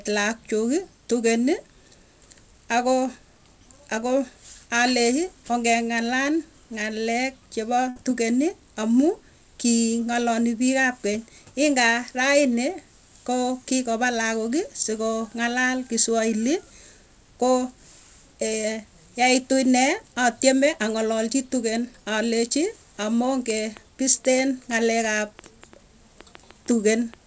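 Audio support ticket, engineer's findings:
Burst of packet loss, 7.90–7.98 s, right after "alechii ongeng'alal ng'alek chepoo". The receiver's concealment continues the last speech sound, fading it, for about 58 ms, then playback resumes with roughly 60 ms of speech missing. Probable component: network transport, jitter buffer.

Train of clicks, 23.50–27.15 s, about 15 similar pops at roughly 4.4 per second, irregularly spaced, peaking around 5 dB above the speech and audible in pauses. Likely cause: electrical interference or a faulty connection or power supply injecting pulses.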